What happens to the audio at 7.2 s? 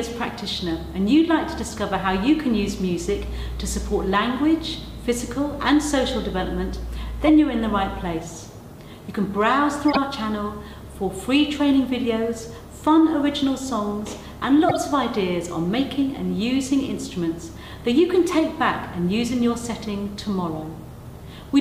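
At 7.22 s a corrupt frame was decoded: bits inside a few consecutive compressed frames were flipped, and the decoder played them anyway instead of concealing them. The misread gains and codes put energy at frequencies where none belongs, so from 7.22 to 7.29 s, about 70 ms, a short artificial chirp or burst of noise cuts through the sound, peaking fairly loud at about -10 dBFS before normal decoding resumes.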